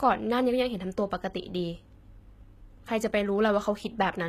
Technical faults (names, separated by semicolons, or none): HE-AAC compression